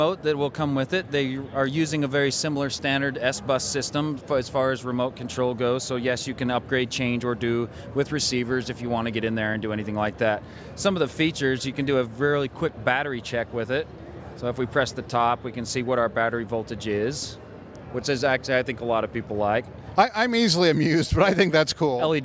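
No technical faults can be heard anywhere in the audio.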